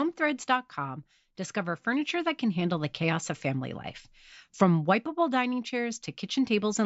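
No technical faults are audible.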